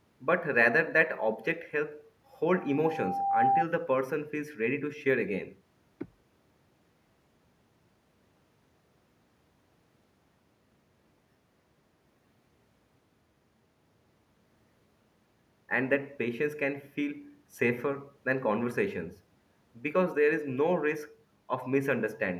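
From 2.56 to 3.65 s, loudspeaker feedback squeal: a single 790 Hz tone swells over about a second, unlike steady hum, as mic-speaker loop gain exceeds one.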